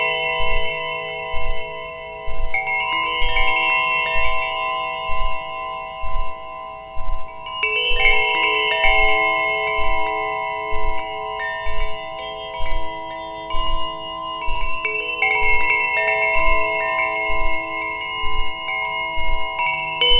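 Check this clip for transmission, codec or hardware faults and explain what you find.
Nothing to flag: the audio carries the call path's normal narrowband character, with nothing above 4 kHz, which fits a G.711 mu-law link at 64 kbps.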